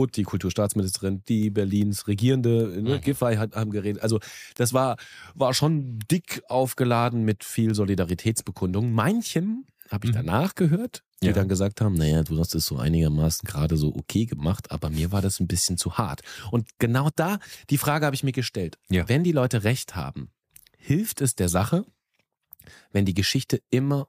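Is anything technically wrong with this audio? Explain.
Yes, there are word clock ticks throughout the speech, from 0.25 s to 23.8 s. The receiving device runs on its own clock instead of locking to the digital link's clock, and the two drift apart by roughly 50 parts per million. Each time they slip, one sample is dropped or repeated and a few around it are misread. This produces a sharp tick about every 0.4 s, around seventy in all, with uneven strength.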